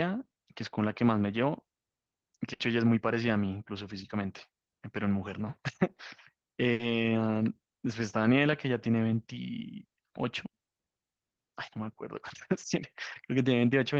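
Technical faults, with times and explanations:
2.53–2.62 s and 6.73–6.82 s, burst of packet loss: Each time, a short run of consecutive packets never reached the player in time, leaving a gap of roughly 60 ms. The receiver covered it by repeating the last good sound and turning it down, so the speech briefly smears into a fading, held tail. Playback then jumps ahead, and about 60 ms of the original speech is simply gone.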